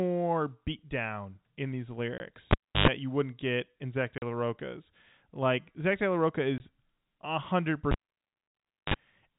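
A speech recording carried over G.711 telephone coding, so nothing above 4 kHz comes through. Packet loss filled with silence leaves hard-edged gaps at 2.18 s (20 ms), 4.18 to 4.22 s (40 ms) and 6.58 s (20 ms). Every gap is a whole multiple of 20 ms, which fits a 20 ms packet length. Unlike the cable faults, these gaps have no hum around them. A cable pulled and plugged in causes the longer dropouts at 2.51 to 2.88 s and 7.92 to 8.94 s. Each starts with a pop and drops to near silence. A 50 Hz mains buzz then sounds for about 104 ms in the first and 41 ms in the second, and a second pop marks the signal's return.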